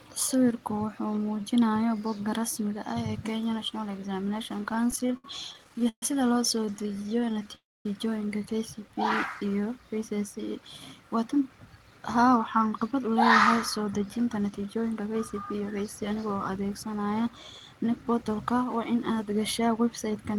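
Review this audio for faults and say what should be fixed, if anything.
Repeated stalls (stutter) make the speech drag and hiccup from 4.71 to 6.03 s, with 18 held or stretched moments, the longest about 131 ms, and again from 6.56 to 7.49 s, with 17 short catches of up to 14 ms. Packets arrived late, the jitter buffer kept running dry, and the receiver extended the last sound each time.

A call audio freeze from 7.55 to 7.86 s sounds like a brief buzz that fades into about 250 ms of silence before the speech resumes. The likely cause is packets held up in transit, which emptied the buffer and added roughly 300 ms of delay.

Jitter buffer speed-up makes the speech sound hurried at an unchanged pitch, running at 110% from 11.33 to 13.17 s, just before "la yahay", and at 108% from 13.77 to 16.35 s, just after it. The buffer had overfilled, so the receiver trimmed short pitch-period slices, about a fifth of a second in each stretch.

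Stabilising the network path with QoS prioritisation for the audio stream, and giving the jitter buffer a larger, gently adapting target, would prevent these faults.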